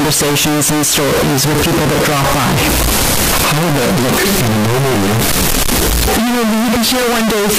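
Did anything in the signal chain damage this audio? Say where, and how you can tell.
Yes, the sample-format conversion stage. The whole speech clip is blasted with harsh distortion, quiet gaps as loud as the talking. That's the signature of signed and unsigned mixed up, likely on 16-bit samples, where the top bit flips and every zero crossing becomes a rail-to-rail jump.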